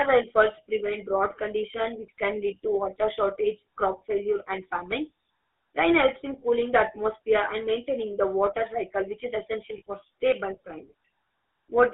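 From start to finish the speech carries GSM full-rate codec damage, plainly audible as a buzzy, gravelly roughness. The coder rebuilds the voice from a vocal-tract filter driven by a sparse, regularly spaced pulse train, so fine detail in the excitation is lost, which fits a 13 kbps full-rate coder. The band runs from about 300 Hz to 3.6 kHz. Band-limiting alone would sound dull but clean, whereas this grit comes from the coarse excitation.

From 9.78 to 9.82 s, right after "cycle which is essential", lost GSM frames leave a short metallic ring. For about 40 ms, which fits two dropped 20 ms frames, the decoder repeats the last good frame's settings, holding a rough, frozen tone in place of new sound. Unlike a dropout or click, there is no silence or sharp edge, just a brief tinny smear carried over from the preceding syllable.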